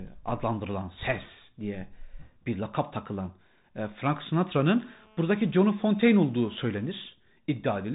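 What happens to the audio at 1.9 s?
At 1.9 s the speech is passing through a Bluetooth CVSD headset codec, as it does across the whole clip. Each sample is coded as a single up-or-down step of adapting size, nothing above 3.8 kHz survives, s sounds turn scratchy, and a granular hiss sits underneath. That grainy, slope-limited roughness, which fits a 64 kbps CVSD link, is what separates it from clean telephone-style band-limiting.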